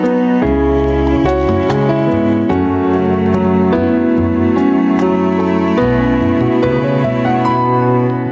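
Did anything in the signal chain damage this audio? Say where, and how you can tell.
Yes. Gain pumping runs through the whole clip, and it sits at the input stage: the microphone gain is likely set far too high, so a fast limiter or compressor clamps down on every loud sound. The gain swings by around 10 dB, leaving the sound squashed and flat in level. The top end, which stops at 8 kHz as a wideband call codec would, is not part of this fault.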